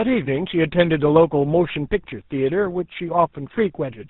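Throughout the speech, the sound is rough, muffled and warbly, with nothing above about 3.8 kHz. This is tandem speech coding: the call was decoded and re-encoded at each link boundary, so two speech codecs ran in a row, each compressing the degraded output of the last. The character fits a chain ending in GSM full rate after an ADPCM stage such as G.726, with a G.711 link between them.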